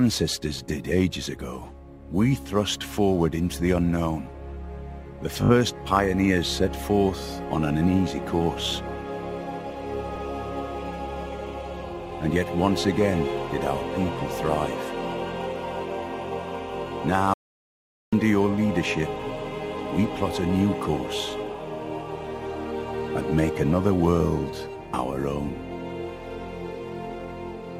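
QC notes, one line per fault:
5.41 to 5.52 s and 10.15 to 10.23 s, repeated frames: the sound stutters. At 5.41 s a single 20 ms frame plays five times over, and at 10.15 s an 80 ms run of frames plays twice. Each adds 80 ms to the clip.
17.34 to 18.13 s, audio dropout to silence: the sound cuts off mid-flow into about 0.79 s of dead digital silence with no room tone, then resumes abruptly. The input was likely lost, perhaps through a disconnection or a stray mute, while silence kept being written, so that stretch is gone.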